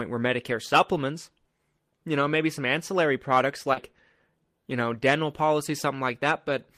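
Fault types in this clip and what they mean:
Short concealed packet loss: a brief smear just after "maybe some ancillary products", where about 40 ms never arrived and the receiver stretched the preceding sound across the gap.
Lost packet rebuilt from error correction: a rougher, noisier 40 ms patch from 3.76 s, decoded from the low-bitrate backup copy that the following packet carried.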